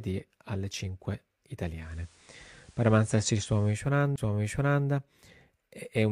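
Speech, with a digital radio blending to analogue from 1.71 to 3.92 s. The receiver cross-fades over about 250 ms to FM, bringing hiss about 35 dB below the signal and a level shift of about 3 dB. A CD skip at 4.16 s, a brief mute where the laser jumped tracks, appears as a near-silent notch in the waveform followed by a discontinuity.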